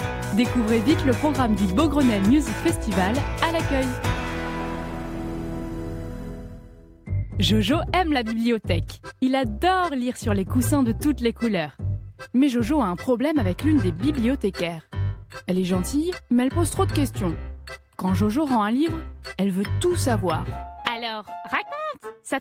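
Clock drift between sender and receiver runs through the whole clip: the sending device's clock is fast, by something like 4 percent, so audio arrives a little quicker than the receiver plays it out. The jitter buffer keeps creeping fuller, and the receiver has to discard material to stop it overflowing. On a waveform this leaves no single obvious event, just a steady need to trim that surfaces as the corrections described next.

Repeated timing corrections occur from 0.25 s to 22.11 s, with the receiver consuming audio at about 105 percent of normal pace. Because the sender is fast, every edit removes a short piece rather than repeating one, and the cuts fall at uneven intervals. Each is slight. A waveform shows tiny seams where cycles jump, and a spectrogram shows brief vertical discontinuities scattered irregularly across the span.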